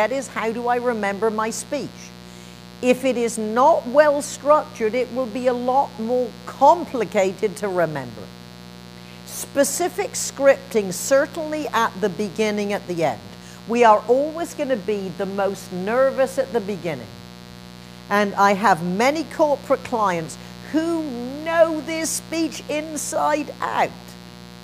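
Mains buzz runs through the whole clip, from the first second to the last, sitting roughly 20 dB below the wanted sound. It is a 60 Hz buzz, so something in the chain, such as a dimmer, a rectifier or an unshielded run, let sharp switching spikes in twice per mains cycle. Those spikes carry a dense stack of 60 Hz harmonics well up into the kilohertz range, which is why it comes across as a steady, raspy buzz rather than a smooth hum.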